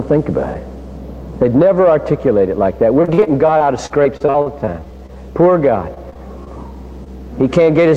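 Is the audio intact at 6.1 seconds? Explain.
No. Between 5.94 and 6.48 s the stream suffers repeated packet loss (robotic sound): four short gaps, the longest 17 ms, are each patched by stretching the preceding sound, about 12% of that span. The result is choppy audio with small pieces missing.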